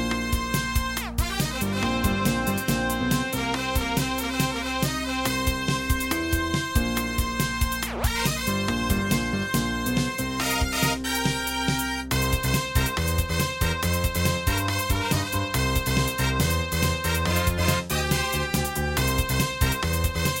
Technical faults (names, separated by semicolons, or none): none